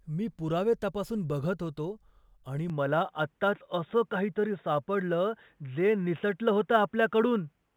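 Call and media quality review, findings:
Input switched to a poorer device at 2.70 s, after "तपासून बघत होतो आणि": no gap, nothing above 3.8 kHz to the end, faint new noise floor; likely a headset call-profile mic.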